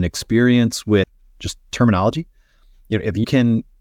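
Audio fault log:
1.02 s, compressed frames skipped: About 70 ms of speech vanishes just before "just terminology", which fits roughly three 24 ms frames. The audio jumps ahead by the length of the missing frames.
3.23 s, compressed frames skipped: Around 100 ms goes missing, which fits about five 24 ms frames. The audio jumps ahead by the length of the missing frames.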